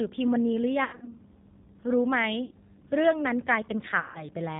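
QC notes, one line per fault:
Throughout: G.729 codec damage, plainly audible. The speech has a slightly rough, synthetic edge. Nothing above 4 kHz comes through, so sibilants sound dull. The decoder rebuilds each 10 ms frame from a vocal tract filter, a pitch predictor and a few pulses, and that coarse model causes the roughness. The bitrate sounds like 8 kbit/s, which fits the G.729A variant.
0.84–1.14 s, 2.45–2.53 s, 4.00–4.26 s: VoIP packet loss concealed by the speech codec. About 180 ms goes missing in the first gap, spread over 240 ms, with the longest hole about 90 ms. About 60 ms is lost in the second and about 150 ms in the third. In each gap the decoder repeats its last pitch and filter at falling gain, so the speech smears into a fading buzzy tone or coloured noise. It stays weak briefly after each gap while the decoder recovers.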